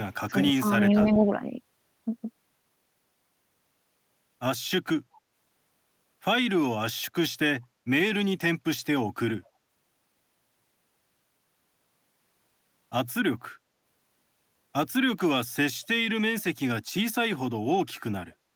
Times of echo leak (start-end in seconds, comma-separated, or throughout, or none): 0.96-1.01